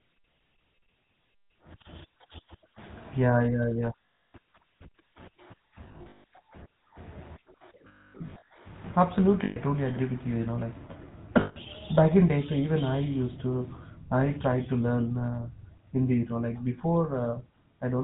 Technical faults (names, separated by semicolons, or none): GSM full-rate codec; lost GSM frames